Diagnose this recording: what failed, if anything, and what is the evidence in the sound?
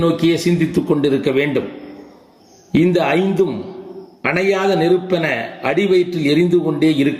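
Gain pumping throughout: the gain swings by around 20 dB, likely excessive input gain driving a fast limiter at capture.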